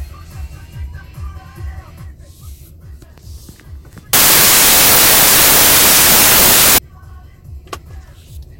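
From 4.13 to 6.78 s there's a wrong sample width: packed 24-bit data read as 16-bit, so loud noise swamps the sound, which drags at two-thirds speed and lower pitch.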